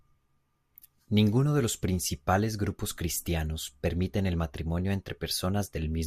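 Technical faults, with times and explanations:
No technical faults can be heard anywhere in the recording. Nothing in the sound points to trouble in how the speech was captured or passed along.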